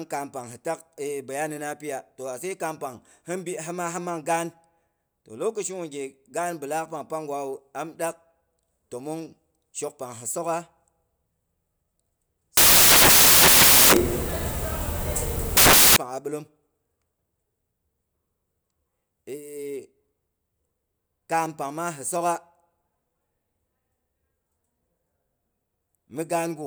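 From 12.57 to 15.96 s the speech gives way to loud, harsh broadband noise, samples built from the wrong bytes, just before "pang a bilom". Misassembled bytes make noisy low bits dominant, so the waveform fills out into dense noise and the spectrogram shows flat broadband energy.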